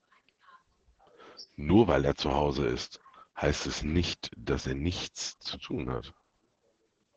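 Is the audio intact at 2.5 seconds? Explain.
No. At 2.5 seconds the speech carries Opus voice compression, present through the whole clip. The SILK coder models speech coarsely, consistent with about 10 kbps. Nothing sounds above 9.5 kHz, and the speech is muffled, hoarse and slightly robotic.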